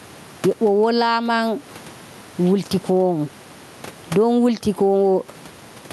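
Gain pumping runs throughout the speech. The gain swings by about 15 dB, likely from excessive gain driving a fast limiter.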